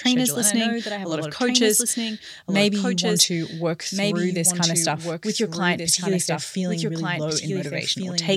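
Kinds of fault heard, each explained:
Doubled audio track: the whole speech plays twice, the second copy a bit quieter, dry, roughly a second and a half behind, likely from a second, slower capture path.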